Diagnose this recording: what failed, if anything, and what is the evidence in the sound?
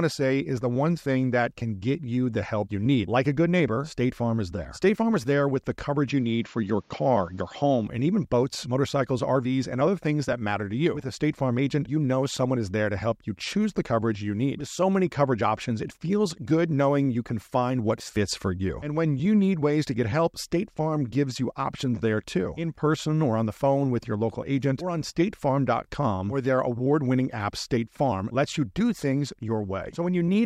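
Input switched to a poorer device, 6.09 to 7.87 s: the speech suddenly loses everything above 7.3 kHz and gains faint noise about 40 dB down, likely a driver-stage device swap.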